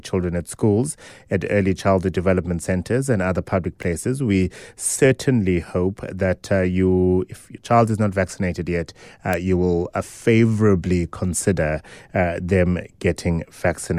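Speech, with two bit error spikes, single flipped samples heard as sharp ticks at 3.83 s after "centers and other public" (about -21 dBFS) and 9.33 s after "not vaccinated yet uh" (about -3 dBFS).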